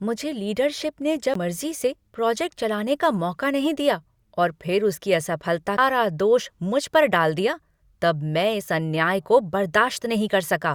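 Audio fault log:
1.34 s and 5.77 s, CD skip: each is a tiny tick with a very short dropout, and the speech picks up from a different point instead of continuing smoothly, the first between "मुझे लीडरशिप ने" and "से प्रोजेक्ट चलाने का", the second right after "और फिर उसकी असफलता". A knock or a disc flaw threw the laser onto another turn of the spiral. The player muted briefly and resumed from that new position, causing the abrupt jump in the speech.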